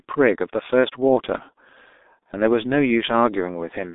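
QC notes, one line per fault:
Throughout: G.723.1 codec, a low-rate telephony coder near 6 kbit/s with a slowly updated voice model, cutting everything above 3.8 kHz, leaving speech muffled, hoarse and smeared at consonants.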